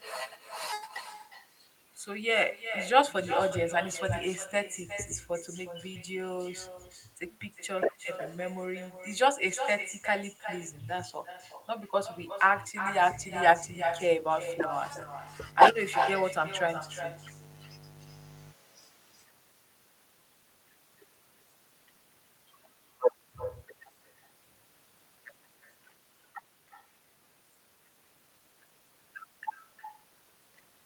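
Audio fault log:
Throughout: echo with no canceller. Every phrase returns as a distinct, thinner copy about 9 dB quieter and roughly 0.4 s late, as the far end's loudspeaker feeds its microphone back into the call. Unlike room reverberation, it is a separate delayed repeat, not a smooth tail.
12.84–18.54 s: mains buzz. A steady, raspy buzz sits roughly 20 dB under the speech, built on 50 Hz with sharp switching spikes twice per cycle whose harmonics climb into the kilohertz range. That edge separates it from a plain low, smooth hum.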